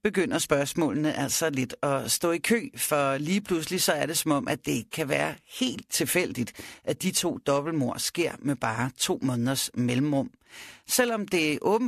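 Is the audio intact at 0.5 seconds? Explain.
Yes, the speech at 0.5 seconds plays through cleanly, with no dropout, click, distortion or other audible fault at that moment.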